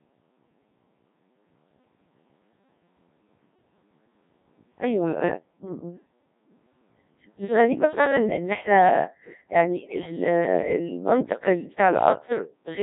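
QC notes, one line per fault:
throughout, Codec 2 vocoder: speech sounds robotic and buzzy because the decoder rebuilds it from sine waves using only pitch, voicing, energy and envelope, consistent with roughly 1.3 kbit/s.
9.77–10.12 s, bit errors on digital voice radio: speech breaks into warbling, pitch-jumping gibberish as flipped bits, around one in ten, scramble each frame's pitch, level and spectrum.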